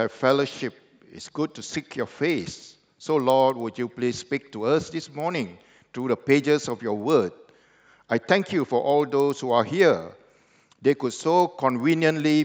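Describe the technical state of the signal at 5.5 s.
A steady tick every 0.1 s, about 10 per second, runs through 5.5 s and the whole clip: a resampler restarted on every block, likely a 16 kHz to 48 kHz conversion, leaving an error at each 100 ms block edge.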